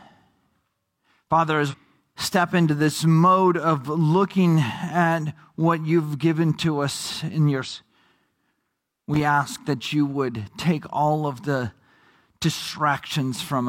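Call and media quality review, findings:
Damaged data in a compressed stream, 1.68–1.74 s, just before "step into this mode". A 68 ms disruption. Probable component: decoder input. Corrupt frames misread or rejected, sync lost until the next valid header. Spectrogram: an abrupt break in the harmonic pattern. Waveform: a discontinuity at both edges.

Damaged data in a compressed stream, 7.62–7.68 s, right after "to us in your". Same mechanism, 64 ms disruption. Same spectrogram and waveform signature.

Loose connector crackle, 9.14–9.21 s, just before "ask that you would". An irregular 66 ms crackle burst. Probable component: a worn or dirty contact in the analogue path chopping the signal. Spectrogram: scattered broadband vertical streaks. Waveform: a cluster of spikes.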